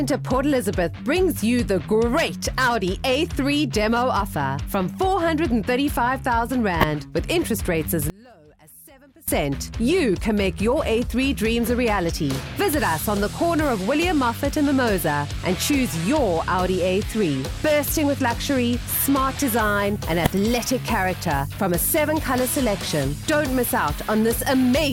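Two short bursts of misplaced energy, at 6.81 to 6.84 s and 20.25 to 20.30 s, are a corrupt frame decoded: damaged bits in a few compressed frames made the decoder put fairly loud energy at the wrong frequencies. From 8.10 to 9.28 s the sound drops by about 27 dB to a faint residue, not to silence, which likely points to one channel inverted: the material common to both channels cancels when they are summed to mono, and only their difference remains.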